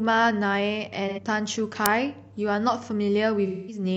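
From 1.07 to 1.19 s the speech turns briefly smeared and noisy. This is AAC frame loss with concealment: about 85 ms of audio, consistent with two missing frames, was filled in from the last good spectrum. At 1.86 s a sharp, loud crack lasts about 2.9 ms. That is an uninitialised buffer, where leftover memory was played as samples, which fits a 128-sample block. A longer smeared, noisy stretch runs from 3.46 to 3.83 s. This is more AAC frame loss with concealment, about 213 ms, consistent with five lost frames being reconstructed.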